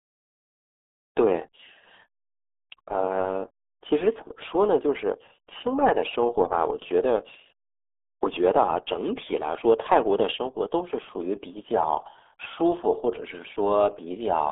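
From start to finish the speech carries the damage of the RealAudio 14.4 codec: the band is confined to roughly 300 Hz to 3.5 kHz, with nothing above 3.7 kHz, and heavy coding leaves it muffled and gargly, which fits an 8 kbit/s dial-up speech codec.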